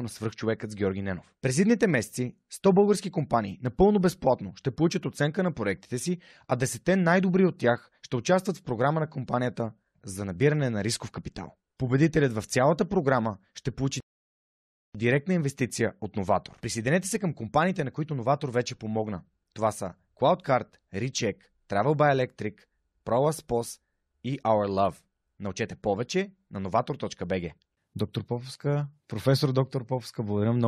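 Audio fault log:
14.00 to 14.95 s, rebuffering stall: the speech drops to silence for about 0.94 s, then picks up exactly where it broke off. Playback ran short of downloaded audio and paused until more arrived, so nothing is skipped, but the gap adds time.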